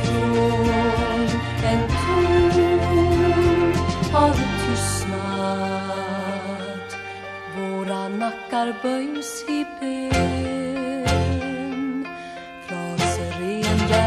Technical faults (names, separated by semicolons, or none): none